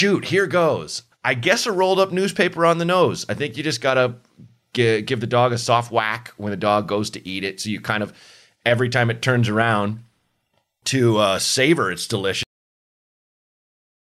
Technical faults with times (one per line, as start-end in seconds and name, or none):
12.43-14.07 cut-off end